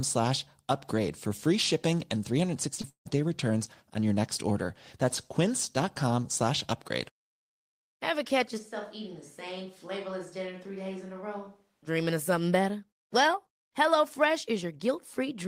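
Around 2.8 s the audio smears twice in quick succession, first from 2.75 to 2.79 s and again from 2.81 to 2.85 s. Each is a brief wobble where the sound seems stretched rather than heard fresh. These are short concealed packet losses. About 20 ms of the stream went missing each time, and the receiver bridged each gap with roughly 19 ms of sound extrapolated from what came just before, then blended back into the real signal.

A longer break follows from 2.89 to 3.07 s. The last sound carries on as a fading buzz or hiss, then drops to near silence for about 0.11 s before the audio resumes further along, with that stretch simply gone. This is most likely a long network dropout. Around 0.16 s of audio never arrived, and the concealment ran out of material to extend, so it faded to silence.

From 8.59 to 11.86 s the speech suddenly turns roomy and hollow, thinner in the bass and about 10 dB quieter. 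Background noise sits only around 35 dB below the speech. Both changes, in and out, are abrupt. The likely cause is a switch to a distant microphone: the close microphone's signal dropped out or was left out, and a microphone further from the talker filled in for those three seconds.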